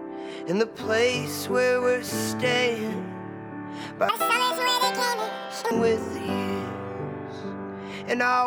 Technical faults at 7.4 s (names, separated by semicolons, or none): none